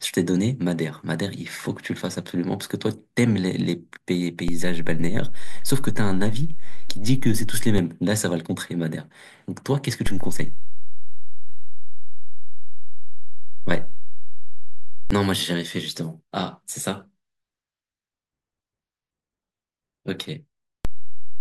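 At 4.48 s the speech gains a DC step of about -14 dBFS, returning at 7.78 s. Another, about -12 dBFS, spans 10.07 to 15.11 s. A third, about -13 dBFS, starts at 20.85 s. Each zero-line jump thumps dully. The speech continues unchanged.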